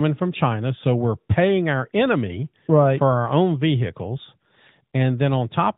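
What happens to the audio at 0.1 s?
Nothing goes wrong at 0.1 s; the audio is intact there, carried through the AMR narrowband mobile codec with no fault at that moment.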